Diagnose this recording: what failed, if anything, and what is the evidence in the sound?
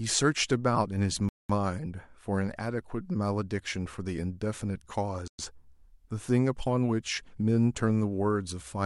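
Bluetooth stall at 1.29 to 1.50 s and again at 5.28 to 5.39 s: the speech drops to dead silence for 0.21 s, then 0.11 s. This is likely a wireless-link fault, where delayed packets emptied the headphones' playback buffer until retransmissions arrived.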